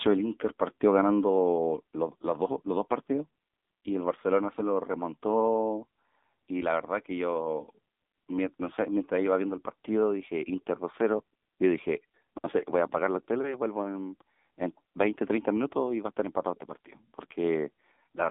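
From start to finish the speech runs through an AMR narrowband mobile codec: nothing above 3.7 kHz, a thin 200 Hz to 3.6 kHz phone-line band, and clearly buzzy, synthetic vowels from the pulse-driven vocal model, which points to a low mode around 7.4 kbps.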